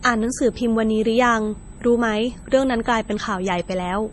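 A steady USB whine at 8 kHz runs through the whole speech clip. It sits faint, well below the voice. The bus draws current in 125-microsecond microframes, and that ripple leaks into the audio path through power or ground. It comes through as a thin, fixed-pitch whistle.

The speech also sounds heavily processed throughout. Nothing remains above 11.4 kHz, so the top end is sharply cut. Consonants sound watery and swirly, with metallic chirps on s sounds. This is likely MP3 compression at a low bitrate.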